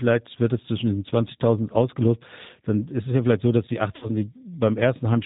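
All the way through, the speech has that slightly rough, synthetic G.729 codec sound, nothing above 4 kHz, consistent with an 8 kbit/s voice stream. Then at 3.96 to 4.10 s, right after "vielleicht so dass die", there's VoIP packet loss concealed by the speech codec: about 60 ms went missing, which fits three lost packets. The decoder stretches the last sound into a fading buzzy tone or coloured noise that stays weak briefly afterwards.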